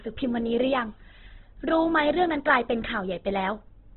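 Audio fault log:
throughout Opus compression: speech sounds narrow, grainy and rough, with nothing above 4.2 kHz, likely from heavy Opus coding near 12 kbps filling bands with noise.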